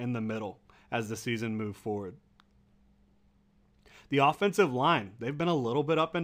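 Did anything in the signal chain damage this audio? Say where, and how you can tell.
Yes, imaging from linear upsampling throughout: dulled top end, faint mirrored images from 11 to 22 kHz about 35 dB down, shimmering sibilants. This fits straight-line interpolation up from roughly 22 kHz.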